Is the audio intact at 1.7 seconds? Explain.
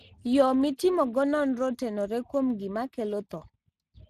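No. At 1.7 seconds the speech carries Speex codec damage, which runs through the whole clip. Speex is a CELP coder: it models the voice with a filter driven by an excitation signal. Here it has too few bits to render that excitation faithfully, which fits a bitrate of around 22 kbps. The plainly audible result is a noisy, hoarse texture. Nothing reaches above about 15.3 kHz.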